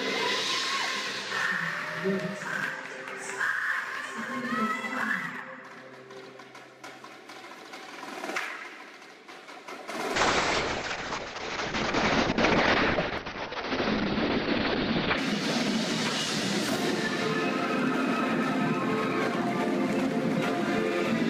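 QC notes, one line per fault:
10.15–15.24 s, call bitrate drop: top end cut to 6 kHz, coarse watery texture for about 5 s, consistent with the encoder falling from 128 kbps to roughly 6 kbps.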